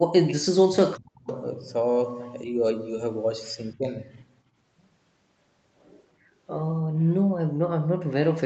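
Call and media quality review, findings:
Speech suppressed in double talk, 0.00–1.29 s and 3.73–3.99 s. Speech level collapses, first dip roughly 40 dB deep, second shallower, around 25 dB. Likely echo canceller treating near-end speech as echo while far end talks and attenuating both.

Background gated by the echo canceller, 6.82–7.08 s. Room noise floor drops out about 33 dB for roughly 0.2 s, then returns. Canceller clamps microphone gain during loudspeaker playback and releases afterward. Audible as a brief hole in the ambience.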